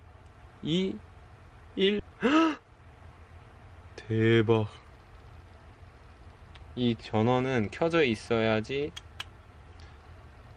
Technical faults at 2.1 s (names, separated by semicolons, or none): skip ahead